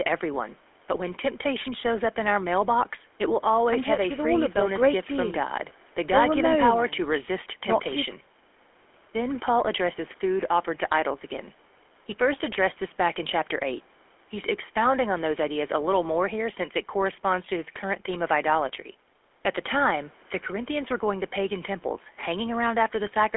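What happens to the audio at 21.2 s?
The speech at 21.2 s, like the whole clip, has passed through the GSM full-rate codec, consistent with a 13 kbps stream. It rebuilds the voice from a vocal-tract model fed by a coarse, regularly spaced pulse train, so the sound is buzzy and gravelly, with a narrow 300 Hz to 3.4 kHz band.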